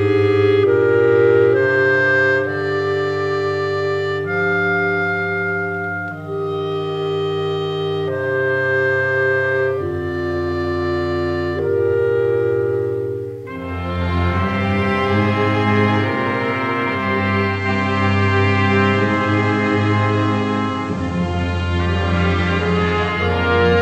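At 17.47 s the receiver loses its digital stream and takes about 240 ms to cross-fade to the FM analogue feed. That's digital radio blending to analogue. Hiss comes in around 30 dB down, with no level jump. It stays on FM until 23.26 s.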